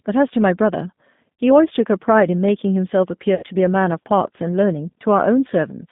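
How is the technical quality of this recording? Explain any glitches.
The recording is degraded throughout by narrowband codec coding and has two audible dropouts.

G.729 codec, throughout: the 8 kbit/s model rebuilds speech from a filter and sparse pulses, leaving a rough, synthetic tone. The spectrogram shows nothing outside roughly 150 Hz to 3.7 kHz.

VoIP packet loss concealed by the speech codec, at 1.35–1.41 s (60 ms lost) and 3.35–3.44 s (80 ms lost): the decoder repeats its last pitch and filter while lowering the gain, producing a fading buzzy tone or coloured noise. The waveform shows a shrinking, overly regular stretch and flattened harmonics on the spectrogram.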